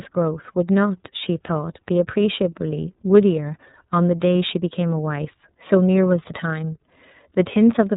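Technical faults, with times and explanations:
Throughout, iLBC codec: nothing above 4 kHz survives, and independently coded 30 ms frames make the speech plainly rough and synthetic, which fits a 13.33 kbps mode.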